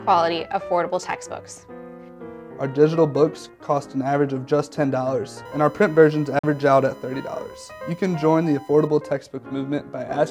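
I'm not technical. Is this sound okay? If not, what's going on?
No, there are two problems. From 5.45 s to 8.87 s there's a USB whine, a steady, fairly quiet high-pitched tone at 1 kHz. It comes from electrical noise of a USB connection leaking into the audio through the power or ground wiring.

At 6.39 s the sound cuts out completely for about 50 ms, then picks up slightly further along, as if it kept playing during the gap. That's a Bluetooth dropout, most likely because audio data didn't reach the wireless headphones in time and was thrown away.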